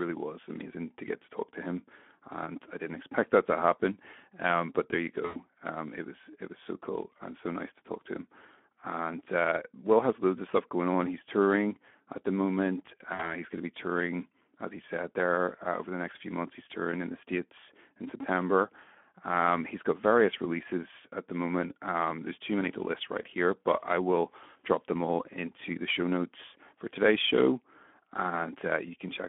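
Throughout, the speech sounds hoarse, grainy and noisy, confined to a narrow 200 Hz to 3.4 kHz band. This is Speex codec damage: a low-rate CELP coder, consistent with around 11 kbps, has too few bits to model the excitation, so the voice turns noisy.

From 5.25 to 5.39 s the sound is stretched out and fades, and from 13.13 to 13.42 s it happens again. These are VoIP packet losses concealed by the speech codec. About 100 ms and then 60 ms of audio went missing, consistent with five and three 20 ms frames. The decoder filled each gap by extending its last pitch and filter while lowering the gain. The voice stays weak for a short time after each gap.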